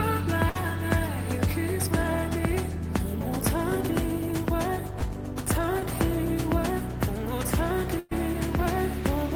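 Burst of packet loss at 0.49 to 0.57 s: about 60 ms never arrived, so the receiver stretched the last sound and faded it before jumping ahead. Short concealed packet loss at 4.99 to 5.04 s and 5.80 to 5.83 s: roughly 20 ms gaps filled by extrapolation, heard as brief smears. Burst of packet loss again at 7.99 to 8.13 s: about 120 ms lost, concealed by a decaying continuation, then a skip forward.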